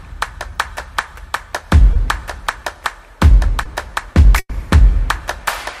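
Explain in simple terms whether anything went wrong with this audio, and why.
Two short concealed packet losses occur, at about 1.93 s and 3.63 s. Each time, roughly 20 ms of audio never arrived, and the receiver covered the gap by stretching the sound just before it. The result is a brief smear or wobble rather than a clear break.

A burst of packet loss follows from about 4.39 s to 4.51 s. Here 100 ms went missing. The receiver continued the last sound and faded it, ending with about 40 ms of silence, then resumed further on with that stretch skipped. It is longer than the two short losses, and it fades into silence instead of blending smoothly back.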